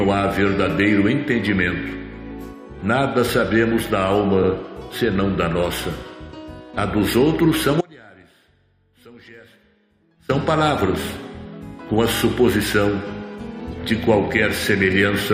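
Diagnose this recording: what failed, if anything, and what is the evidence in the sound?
At 7.81 s the signal drops out abruptly and returns at 10.29 s, so about 2.5 s are lost. The gap is an audio dropout to a faint residue, not silence: a weak trace of the sound stays, roughly 25 dB below its normal level. A pause or fade would taper, and a dead link would go fully quiet. A live path carrying only a leak points to a likely intermittent connection in the analogue wiring or at the input.

Repeated frames appear from 12.16 to 12.20 s. One block of about 23.2 ms plays two extra times, giving a short stutter and adding 46.4 ms to the running time. The block length fits a 1024-sample codec frame at 44.1 kHz, so the fault points to the codec or storage stage, where a frame was written or sent more than once. A buffer underrun would leave a gap instead, while here identical material recurs.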